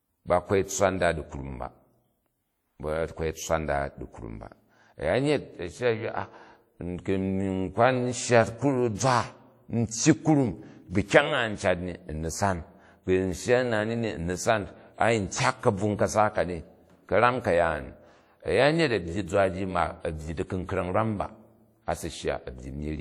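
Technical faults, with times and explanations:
Throughout, WMA compression: the speech carries a ringing, washy smear around each syllable and a hiss that breathes with the level. That fits an early WMA encoder at roughly 48 kbps, likely spreading quantisation noise across long transform blocks, despite content reaching about 20.1 kHz.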